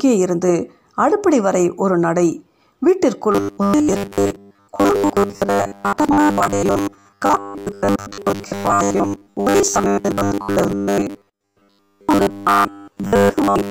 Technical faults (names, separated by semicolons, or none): robotic sound from repeated short buffers